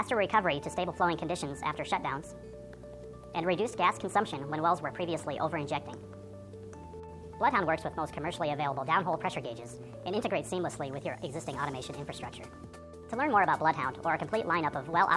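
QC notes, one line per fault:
Throughout, wrong sample rate: everything runs 1.5 times too fast and sits about 7 semitones high, because the audio plays back at a rate half again above its original one with no conversion, which fits 16 kHz material being clocked out at 24 kHz.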